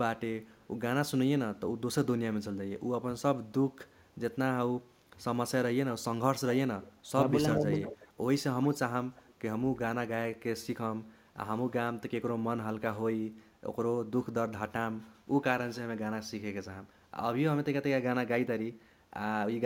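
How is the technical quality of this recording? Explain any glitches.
The recording has two recurring call-path faults, both concentrated in the first ten seconds.

Echo leak appears at 0.56–0.67, 3.87–4.14, 6.82–6.87, 7.74–8.08 and 8.62–9.79 s. A delayed copy of the speech returns about 0.35–0.37 s late. It is faint at first but grows to roughly 15–20 dB below the speech by 8–10 s. The likely cause is a far-end echo canceller leaving loudspeaker pickup in the return signal.

Speech suppressed in double talk occurs at 5.87–6.52 and 7.11–7.69 s. The speech dips by up to roughly 20 dB in short bursts, totalling a few tenths of a second. This is likely an echo canceller mistaking overlapping talk for echo and turning down both its own talker and the echo.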